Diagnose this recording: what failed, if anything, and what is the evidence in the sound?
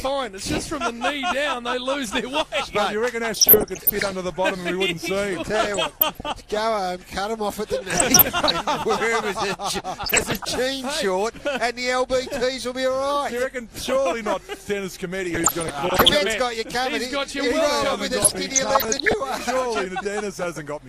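MP2 compression runs through the whole clip. The sound is dull, with a gurgling, granular texture and upper bands flickering in and out. That is the codec stage, likely MPEG Layer II at a low rate, fitting about 80 kbps, starving sub-bands of bits.

DAB burbling appears at 3.32–4.13, 5.61–6.31, 7.90–8.53, 10.04–10.45, 15.25–16.09 and 18.22–19.23 s, as short blips of noise. At the reception stage, bit errors around half to one percent slipped past error correction, corrupting samples so noise lands in single sub-bands.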